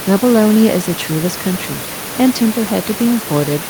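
No technical faults are audible in the speech; the steady room noise sits about 14 dB below the voice and belongs to the recording space, not to the system.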